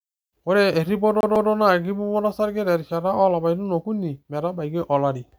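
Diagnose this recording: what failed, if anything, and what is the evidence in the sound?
Playback fault: CD stuck on one turn. The laser jumps back each revolution, so a 0.15 s slice of speech plays twice, 1.21 to 1.50 s, as a stutter.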